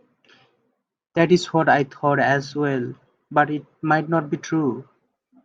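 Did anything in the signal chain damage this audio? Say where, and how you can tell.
No, nothing in the signal chain damaged this audio.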